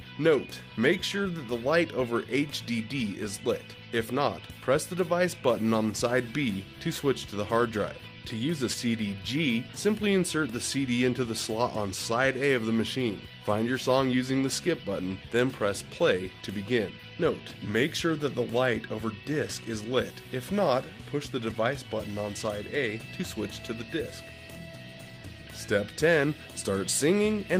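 No technical faults are audible anywhere in the recording.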